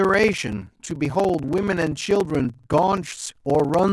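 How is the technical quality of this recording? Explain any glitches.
The technical quality is poor, with one fault throughout. A block size mismatch (padded) zero-fills the end of each block, which fits 1024-sample writes, giving a 20.8 Hz buzz, regular waveform gaps and spectrogram stripes, with speech slowed to 0.889 at normal pitch.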